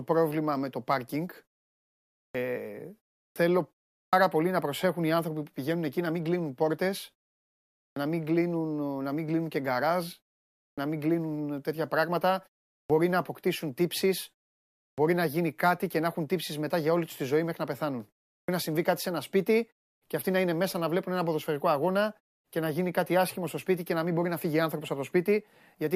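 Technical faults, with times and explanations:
2.25 to 18.48 s, clipped start after a pause: speech resumes abruptly at 2.25, 3.26, 4.03, 7.88, 10.68, 12.8, 14.89 and 18.39 s. Each onset loses 84 to 98 ms. During pauses of 0.33 to 0.86 s, the output device sleeps. It wakes too late, swallowing the first sounds.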